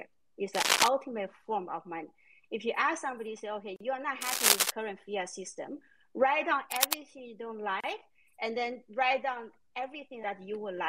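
From 0.55 to 0.88 s a burst of cable scratch noise rides over the sound, a dense, uneven rustle several decibels above it. It returns from 4.21 to 4.70 s and from 6.71 to 6.94 s, each time most likely from a worn cable, connector or control being moved, its contact resistance fluctuating rapidly. At 3.76 s a 42 ms silence cuts into continuous sound, and at 7.80 s a 32 ms one follows, four seconds apart. These are gaps at a join of encoded pieces. Each piece kept its encoder's start-up delay and padded final frame, so the sound drops out, smeared at the edges, and resumes where it stopped.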